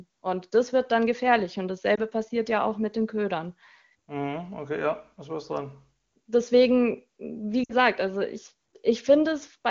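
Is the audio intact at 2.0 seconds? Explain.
No. A lost AMR speech frame falls at about 1.95 to 2.00 s, just before "passiert ja auch mit". One 20 ms frame failed its checksum, so the decoder rebuilt it from the previous frame's pitch and vocal tract settings at reduced gain, leaving a brief dip or warble.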